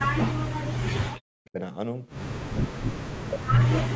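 Speech that sinks repeatedly, from 0.0 to 0.67 s, 0.83 to 1.58 s and 2.58 to 3.88 s, by roughly 40 dB, is likely speech suppressed in double talk, with an echo canceller ducking it against far-end audio. Unlike packet loss, the level is turned down by processing rather than lost in transmission.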